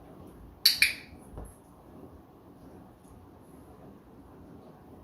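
From 2.94 to 4.84 s there's crude rate conversion: it sounds like a 48 kHz to 44.1 kHz change done by plain linear interpolation with no filtering. That leaves a gritty, inharmonic fizz riding on the louder and brighter moments, sitting well down but audible, maybe 35 dB under the sound.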